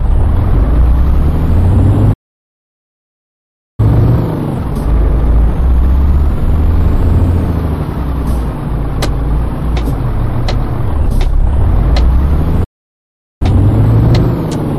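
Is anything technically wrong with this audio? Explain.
Yes, there are a few problems stacked together here.

Hard clipping runs through the whole clip. The level is pushed roughly 7 dB past what the chain can carry, so the peaks get sliced flat, about one sample in twenty. Those squared-off tops throw harmonics way up the spectrum, and you hear it as distortion on the louder moments.

There are two playback stalls. The sound cuts out at 2.13 s and stays silent until 3.8 s, a gap of about 1.65 s. Then it drops again from 12.64 s to 13.42 s, roughly 0.77 s. Each time it simply stops mid-flow and resumes after a dead gap. The likely cause is the player starving for data or having its thread blocked, so nothing reached the output until it recovered.

Right after each stall there's time-compressed catch-up, where the player works off its backlog by snipping out small chunks and cross-fading the joins. 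From 3.8 s to 6.8 s it runs at 1.5x, which sounds obviously rushed but keeps its normal pitch. After the second stall, from 13.42 s to the end, it's a gentler 1.1x, so it's only slightly hurried.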